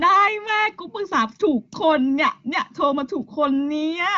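No technical faults can be heard in this speech, which comes through an AMR wideband (HD Voice) link with nothing above about 7.1 kHz.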